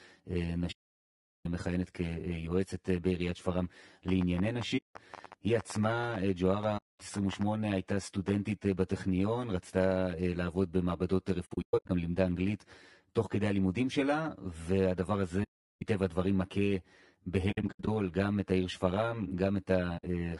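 Throughout, the speech sounds hollow and phasey, with a fixed comb of notches starting near 50 Hz. That is channel delay (comb filtering): one channel trails the other by around 10 ms, and summing them to mono cancels evenly spaced frequencies.

The voice is also rough and grainy throughout, with noise filling the gaps between harmonics and a thin, synthetic-sounding top end. This is likely low-delay AAC compression at a low bitrate, consistent with AAC-ELD near 32 kbps. Its short frames resolve pitch harmonics poorly and spend bits inefficiently.

From 0.71 to 1.46 s the sound fades softly into silence and back. This is AAC frame loss with muting: the decoder zeroes the lost frames, and its overlapping windows smooth the edges, leaving a 0.74 s hole.

From 4.08 to 8.29 s there is a train of clicks. Around twenty similar pops arrive at an uneven pace of about 5 per second, about 10 dB above the speech and audible in pauses too. 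The likely cause is interference or a faulty connection.

Within that stretch, more muted holes fall at 4.77 to 4.96 s (0.18 s) and 6.77 to 7.00 s (0.22 s). Later holes come at 11.45 to 11.90 s, 15.43 to 15.82 s (0.38 s), 17.51 to 17.88 s and 19.97 to 20.04 s (60 ms). The 11.45 s and 17.51 s stretches are patchy dropouts rather than single gaps. Their longest runs are roughly 0.1 s and 70 ms respectively.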